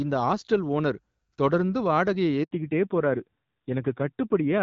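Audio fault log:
2.43 to 2.51 s, handover gap: Right after "ஹாஸ்டல் ஓனர் தொடர்ந்து வாடகையை", the call was passed from one network link to another, and for about 80 ms no speech frames arrived to be decoded. The decoder has nothing to play, so the speech fades out within a few tens of milliseconds and leaves a short hole of silence. Whatever was said during that switch is lost, not delayed.
2.51 s to the end, fallback to narrowband: Once the handover completes, the call no longer runs on the HD Voice wideband codec, which until then carried clear speech at a rate consistent with 12.65 kbit/s. It switches to an older narrowband codec, and the roughness points to AMR-NB at around 7.4 kbit/s. Nothing above 4 kHz survives, so sibilants are dulled and brightness disappears. The speech becomes dull, boxy and coarse for the rest of the clip.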